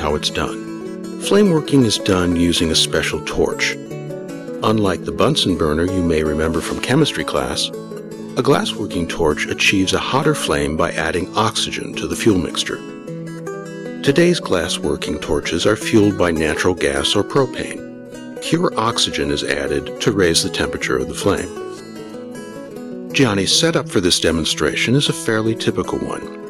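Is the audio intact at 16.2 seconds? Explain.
No: hard clipping persists throughout, 16.2 s included. Overshooting by about 7 dB flattens rare peaks on the waveform, crackling with high-harmonic smears on the spectrogram.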